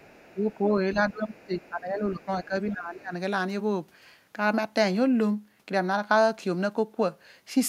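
A speech clip with two echo-control faults in its first three seconds. The other side's voice leaks through from 0.00 to 0.33 s, briefly at 0.50 to 0.54 s, and again from 1.41 to 1.69 s. It sits faintly under the talker, roughly 30 dB down, and closer to 40 dB down in the short middle scrap. The likely cause is loudspeaker playback reaching the microphone and surviving the echo canceller in fragments.

Speech is also suppressed during double talk. From 0.31 to 1.53 s the talker's level sinks, at worst by about 20 dB, for around a second in total. From 1.69 to 3.13 s it dips again, by about 15 dB at most. The voice thins and drops in pieces while the far side is active. This is likely the canceller, unable to separate near speech from echo, turning both down together.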